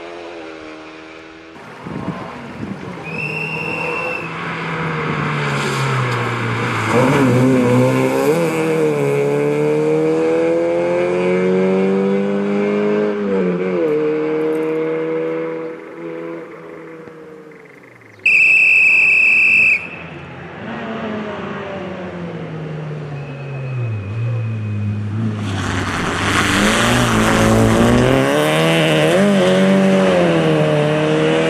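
Overlap-add ripple runs from 25.66 to 28.18 s. The sound was split into windowed frames and rejoined with overlaps whose gains don't sum evenly, so the level swings by about 11 dB once per frame, around 150 times a second. It is heard as a metallic buzz with extra tones around each note.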